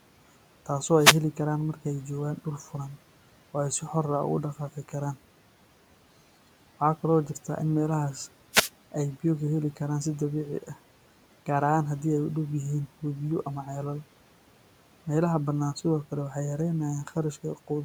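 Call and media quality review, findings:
Wireless microphone noise hit at 0.94–1.24 s and 8.51–8.70 s: brief swishes of static over the speech. Probable component is an analogue FM radio mic, where reflections cancel the signal and receiver noise surges. Spectrogram shows broadband vertical smears; waveform shows noisy bursts above the room noise, which sits about 22 dB below speech.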